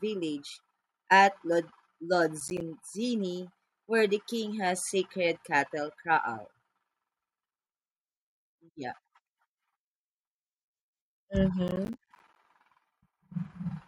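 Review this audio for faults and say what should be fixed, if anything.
Processor overload crackle appears twice in the speech, from 2.40 to 2.61 s and again from 11.68 to 12.36 s. The processor is missing its audio deadlines in a row. Each late buffer drops out as a short gap of silence with hard edges. The gaps sound like chunks of around 10 ms, which fits a small buffer. The second burst is longer, with many more dropouts. To prevent it, raise the buffer size or reduce the processing load.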